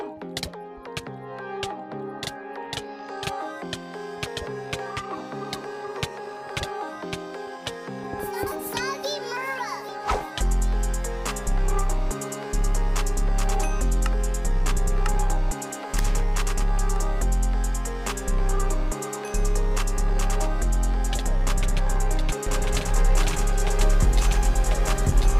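A doubled audio track appears from 22.47 s and runs to the end: a second full-band copy of the sound enters abruptly and trails about a second behind, roughly as loud as the original. The copy carries no decay or room colouring, so it reads as a hard, separate repeat rather than an echo. The likely cause is the same signal being picked up again through a slower path and mixed back in.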